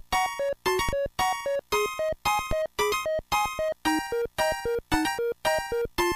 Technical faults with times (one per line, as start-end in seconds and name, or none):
0.89 DC step
2.51 DC step
4.94 DC step